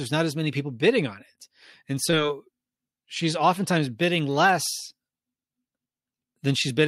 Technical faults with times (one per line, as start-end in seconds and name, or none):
4.66-6.70 periodic USB or driver dropouts